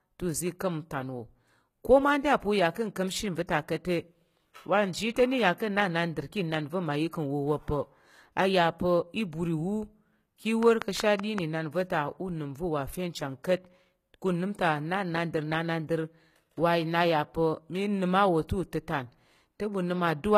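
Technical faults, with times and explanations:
throughout: HE-AAC compression is the likely cause of the plainly audible coding damage. The upper band is rebuilt by copying lower bands upward, so s sounds turn gritty or lispy rather than simply dull. Nothing remains above 14.9 kHz, which fits roughly 20 kbps.
10.63 to 11.39 s: a train of clicks, about five alike pulses at a regular 5.3 per second, standing roughly 15 dB above the signal. Their even pacing and matching shape set them apart from random crackle. Interference from nearby equipment or a faulty connection or power supply is the likely source.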